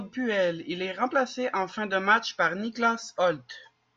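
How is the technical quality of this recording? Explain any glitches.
No glitches or technical faults can be heard anywhere in the recording.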